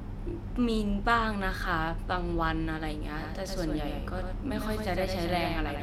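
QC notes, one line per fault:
3.20 s to the end: doubled audio track. A second full-band copy of the speech jumps in abruptly, trailing about a tenth of a second behind and around 5 dB down, with no decay or room colour. Likely a slower capture path picking the signal up twice.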